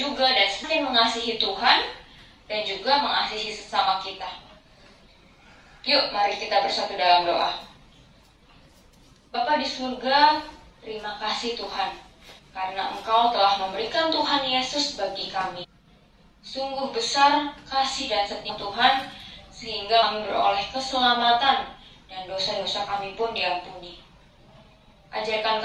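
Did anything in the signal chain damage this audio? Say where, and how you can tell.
Yes, at the codec or storage stage: compressed frames skipped. Brief smeared blips occur at 0.63, 9.34, 12.38, 15.63 to 15.65, 18.49 and 20.02 s. Each is a jump forward by whole 23.2 ms frames, losing roughly 50 to 400 ms. Overlapping frames blur each join.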